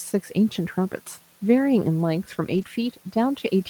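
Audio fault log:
2.53–2.63 s, lost packet rebuilt from error correction: for about a tenth of a second the speech turns coarse and hissy, a grainy patch against room noise sitting about 26 dB below the speech, yet the sound never drops out. Several separate packets went missing, which fits roughly three 20 ms frames, and the decoder filled each hole from the low-bitrate backup copy carried in the following packet. Those thin copies keep continuity but lose detail, hence the rough texture.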